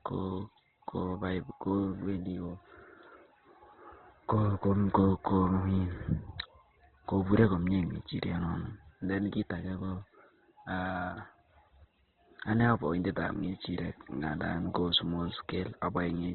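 From start to finish, the speech has nothing above about 4.1 kHz and sounds narrowband, thin and heavily degraded, with a rough, grainy texture. The likely cause is Opus compression in its CELT music mode, at a rate that points to around 12 kbps. With so few bits, the encoder narrows the bandwidth and rebuilds many bands from folded lower content or noise, so the result is coarse rather than swirling.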